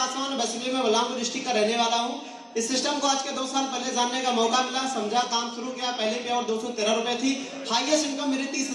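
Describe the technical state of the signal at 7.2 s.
At 7.2 s the signal is intact, with no audible fault at that moment.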